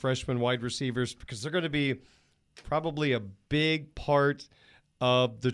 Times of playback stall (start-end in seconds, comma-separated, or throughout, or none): none